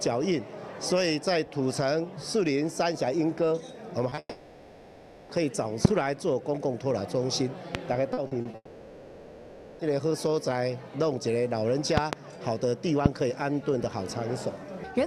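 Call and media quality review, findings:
Short concealed packet loss at 4.09–4.13 s and 4.15–4.19 s: quick smear/wobble, about 20 ms of audio missing each time. Decoder patched the holes by extending the last sound, then blended back. Jitter buffer/network path.

Long network dropout at 4.19–5.31 s, straight after those two: 1.1 s lost. Last sound stretched into a fading buzz/hiss, a brief silence, then audio resumes further on with that stretch gone. Likely a network outage.

Repeated packet loss (robotic sound) at 8.13–8.55 s: choppy stretch with pieces missing. Four gaps, 140 ms concealed, roughly a third of the span, longest gap 40 ms. Each hole patched from the previous sound, next loss hits right after. Same network path.

Second long network dropout at 8.55–9.81 s, picking up right where the robotic bit ends: 1.24 s gone. Same pattern, fading concealment buzz, a short silence, audio back later minus the missing piece. 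Likely the link dropping out again.

Loud pops at 5.85 s (about 25 dB over the signal), 7.75 s (about 20 dB), a double pop across 11.97–12.15 s (about 20 dB) and 13.06 s (about 25 dB). Sharp clicks/thumps sitting on top, audio carrying on underneath. Likely voltage steps from a connector, switch, static or capture driver glitch.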